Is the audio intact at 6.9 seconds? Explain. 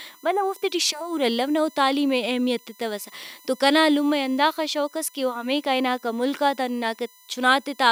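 No. At 6.9 seconds the speech carries USB whine, which runs through the whole clip rather than starting or stopping there. The bus's current draw in 1 ms frames leaks into the audio through the power or ground path. That sets a fixed-pitch whine based on a 1 kHz tone, with its strongest energy up at the 14 kHz multiple. It sits roughly 30 dB below the speech as a thin, high-pitched tone.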